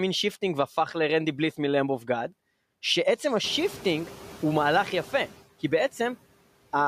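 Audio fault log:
Throughout, noise suppressor artifacts: the suppressor treats the steady background as noise and pulls those frequency bands down frame by frame, by about 17 dB, so the noise drops away in the gaps between phrases and climbs back up underneath the speech each time it resumes. The pumping is easier to hear after the room noise rises by about 18 dB at around 3.5 s, since it then sits only about 19 dB below the speech.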